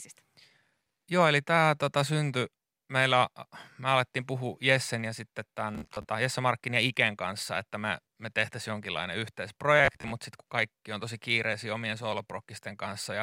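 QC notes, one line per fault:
5.75–6.07 s and 9.79–10.11 s, Bluetooth stutter: late or missing packets make the receiver replay its last short slice, about 0.15 s of sound lost within each 0.32 s stretch, giving a buzzy machine-gun repeat rather than silence. Speech resumes further on, as if it kept playing.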